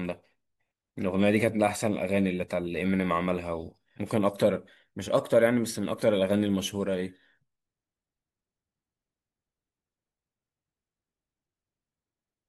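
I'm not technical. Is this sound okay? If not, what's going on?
Yes, the recording is technically sound, with nothing in the signal itself that needs fixing.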